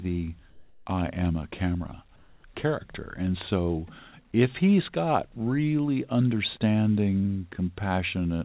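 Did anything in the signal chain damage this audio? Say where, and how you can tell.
Yes, in call processing: comfort noise in place of the background at 0.5–0.86 s, before "I am a camera", and at 2.16–2.44 s, after it. These pauses hold steady noise within about 1 dB of the surrounding level, likely because discontinuous transmission stopped sending and the receiver synthesised filler. A spectrogram shows smooth, featureless grain there, unlike the textured background elsewhere.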